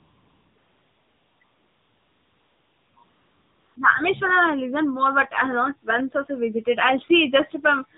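The whole clip goes through the AMR narrowband mobile codec, and you can plainly hear it. Nothing gets above 4 kHz, so the speech sounds boxed-in and phone-like. The buzzy, synthetic edge suggests one of the low-rate modes, around 7.4 kbps, where the codec has very few pulses to rebuild the voice with.

AMR comfort noise fills the first few seconds in four stretches: 0 to 0.56 s, 0.58 to 1.4 s, 1.44 to 2.96 s, and 3.04 to 3.76 s. During each one the phone stopped sending speech frames, and the receiver made up a smooth, steady hiss in place of the real background. You can hear that hiss cutting in and out in the short gaps between stretches.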